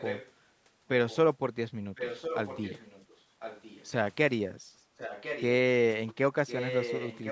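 An echo canceller on the far end likely failed to remove its loudspeaker's sound. This echo leak returns a quieter copy of the speech about 1.05 s late at 0–0.32, 1.09–1.17, 1.95–3.21, 3.39–3.9, 4.97–5.44 and 6.47–7.31 s.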